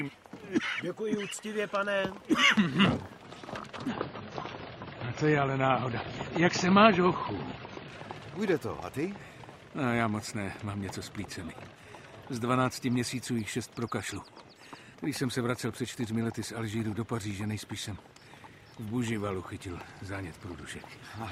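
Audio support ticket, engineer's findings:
Adaptive stream at a lower bitrate, 3.88 s to 7.88 s. Sudden treble loss, nothing above 7 kHz, and rising codec artefacts. No gap at either switch. Lasts 4 s. Probable component: stream client rendition selection. The connection slowed and the player dropped to a lower-bitrate rendition, which fits a switch from 128 kbit/s MP3 to about 23 kbit/s.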